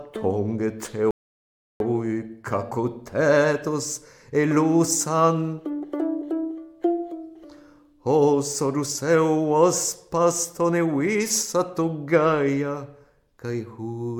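At 1.11 s a rebuffering stall halts playback: the player ran dry of downloaded audio and waited until 1.80 s, adding 0.69 s of silence. Unlike a dropout, nothing is skipped; the sound picks up exactly where it stopped, only later.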